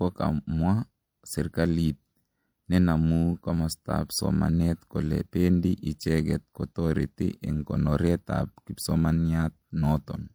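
Speech, with coding artefacts of two different characters present for the whole clip, the likely result of transcoding between lossy codecs. A first encode of roughly MP3 quality near 96 kbit/s appears to have been followed by HE-AAC at around 48 kbit/s. The second encoder spends its limited bits reproducing the first one's artefacts, then adds its own artefacts on top, so both layers are heard together. Nothing is present above 20.4 kHz.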